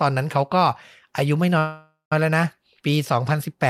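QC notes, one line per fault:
1.58–2.13 s, call audio freeze: sound smears into a fading buzz, then 0.16 s of silence, and resumes where it stopped, now 0.53 s late. Likely a starved jitter buffer.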